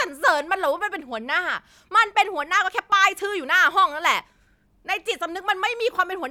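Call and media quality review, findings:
No faults found in the speech clip; nothing to flag for follow-up.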